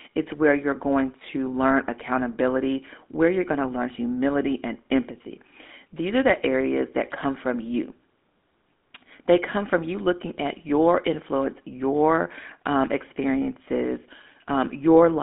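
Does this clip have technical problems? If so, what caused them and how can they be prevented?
Yes. Throughout, the speech sounds buzzy and gravelly and is squeezed into a 200 Hz to 3.6 kHz band. This is GSM full-rate codec damage, which fits a 13 kbps link that rebuilds the voice from a vocal-tract model driven by sparse pulses. To prevent it, use a wideband codec for the call or record the speaker locally rather than over the phone line.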